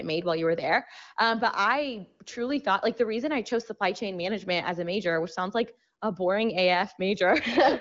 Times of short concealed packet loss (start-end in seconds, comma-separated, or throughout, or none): none